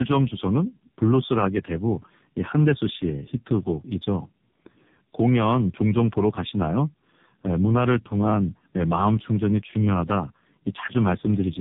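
Speech, with tandem speech coding throughout. The sound is rough, muffled and warbly from start to finish. Nothing is heard above 3.8 kHz. The roughness points to two low-rate narrowband coders in a row, with a plain telephone link between them, which fits AMR-NB at about 7.4 and then 5.9 kbit/s. At each border the audio was decoded and coded again. The second coder worked on the first one's damaged output, so the errors stacked.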